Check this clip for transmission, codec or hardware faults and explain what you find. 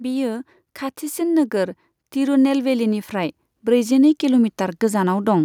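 One fault is present: automatic gain rising. From 1.15 s to 5.4 s the automatic gain control, judging the input too quiet, steadily raises its gain by about 9 dB. Speech and background noise swell together, which distinguishes it from a talker simply speaking louder, where the background would stay level.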